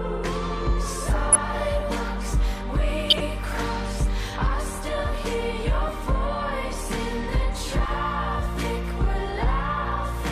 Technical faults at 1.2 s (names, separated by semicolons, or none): MP2 compression; DAB burbling